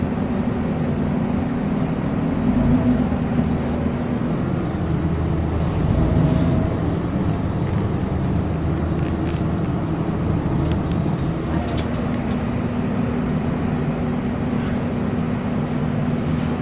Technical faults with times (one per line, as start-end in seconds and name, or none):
none